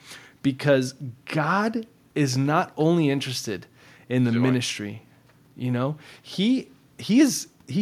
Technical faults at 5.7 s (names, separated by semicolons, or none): none